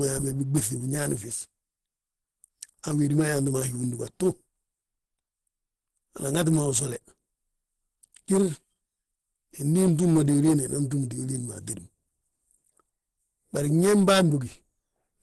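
From start to finish the speech carries Opus compression, likely from an encoder running near 16 kbps in its hybrid speech mode, so the damage is plainly audible. Speech sounds muffled and hoarse. The hybrid mode codes the lower band as speech and fills the upper band coarsely from band energies. On a spectrogram, energy stops sharply at about 12.1 kHz, and the upper band looks smeared and blotchy.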